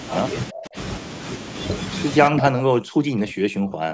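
From 0.09 to 0.19 s, a delayed copy of the speech comes through. This is an echo leak. It trails the original by about 0.35 s and sits roughly 10 dB below it. The likely cause is a far end on loudspeaker whose echo canceller let part of the returned sound slip past. The scrap is brief, a short ghost rather than a full repeat.

From 0.51 to 0.76 s, the speech dips sharply, by around 25 dB at its lowest. This is speech suppressed in double talk. It returns from 2.31 s to the end of the clip and is much deeper there, with drops near 40 dB across roughly a second and a half. The likely cause is an echo canceller that could not tell the talker apart from loudspeaker echo while both sides spoke, so it turned everything down. The speech fades.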